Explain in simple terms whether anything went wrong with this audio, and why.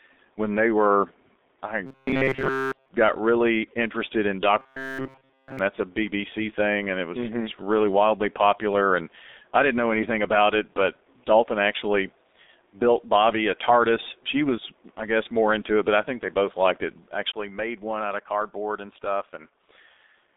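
Two things went wrong with this speech.

The whole clip has gone through the G.723.1 codec, an old internet-phone format that squeezes speech very hard. It keeps only a narrow band, roughly 250 Hz to 3.7 kHz, and nothing above 4 kHz survives. So the voice sounds muffled and hoarse. Crisp sounds like s and t get blurred. The damage here is heavy, and it lasts from start to finish.

There is also robotic sound from repeated short buffers, from 1.86 to 2.88 s and again from 4.59 to 5.59 s. During each stretch the voice becomes a stiff, metallic buzz at 133 Hz. The likely cause is that fresh audio stopped arriving in time. The player kept looping a tiny slice, about 7.5 ms long, instead. Almost all of the real sound in those moments was skipped.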